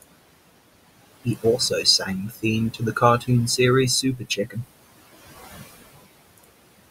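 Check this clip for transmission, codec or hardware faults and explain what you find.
Two noise suppressor faults are present, under room noise sitting about 15 dB below the speech.

Noise suppressor artifacts run throughout. Bands judged as steady noise are pulled down about 20 dB frame by frame, so the leftover background sinks between the words and rises under them.

Speech cut by the noise suppressor occurs at 1.24–2.08 s, 2.29–2.44 s, 2.72–3.02 s and 4.02–4.58 s. The suppressor mistook quiet speech for noise and dropped it by about 12 to 15 dB. Each stretch loses only a brief portion, a fraction of a second, so those parts sound swallowed and faint.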